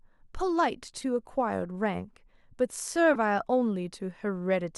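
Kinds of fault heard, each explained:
Corrupt frame decoded: at 1.01–1.04 s and 3.14–3.16 s, damaged compressed frames were played anyway, throwing energy into wrong frequencies as short blips, the second louder.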